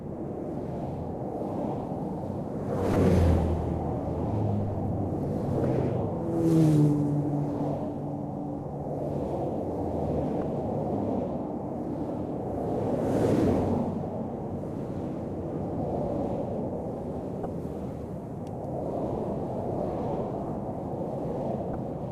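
Damaged data in a compressed stream shows up five times, at 2.93, 5.62, 10.39, 17.43 and 21.72 seconds. Each lasts about 30 ms. Corrupted bytes break a frame. The decoder misreads it, loses sync and hunts for the next header. A brief glitch results.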